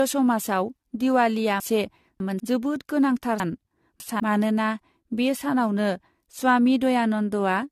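A speech recording with a swirly, smeared, hollow texture throughout, with consonant attacks blurred and nothing above about 14.1 kHz. That is more damage than a single pass at the bitrate would explain, and it points to generation loss: the audio was likely decoded and re-encoded around five times, consistent with an AAC-LC chain at about 64 kbit/s. Each pass quantises again on a shifted frame grid, so noise and spectral holes pile up. Two garbled, jumbled moments come from chunks out of order. The first runs from 1.6 to 2.4 s, ending just before "जोबोद गोनांथार". The second runs from 3.4 to 4.2 s, starting right after "जोबोद गोनांथार" and ending before "मानोना बे सानावनो". In each, a 200 ms chunk plays three chunks late, after the audio that should follow it. Nothing is missing, but the sequence is scrambled, with three hard joins each time.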